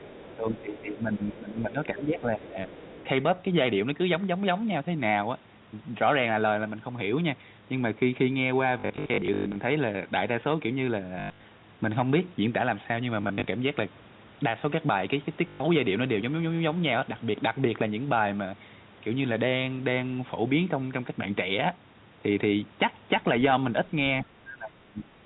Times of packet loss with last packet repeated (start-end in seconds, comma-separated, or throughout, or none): 8.80-9.56, 11.20-11.44, 13.22-13.46, 15.48-15.60